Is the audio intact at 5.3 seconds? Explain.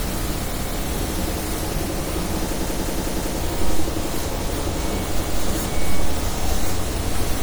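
No. At 5.20 s new audio failed to arrive in time, so the device played its last buffer again, once. From 5.20 to 5.39 s a piece of about 0.19 s sounds twice with a hard join, a short stutter that fits an 8192-sample buffer.

Throughout the clip, including this moment, the likely cause of the degradation is generation loss: the sound was passed through an MP3 encoder about seven times, each pass quantising again on a shifted frame grid. The result is swirly, hollow and smeared, with blurred attacks, in a way that points to a 96 kbit/s chain.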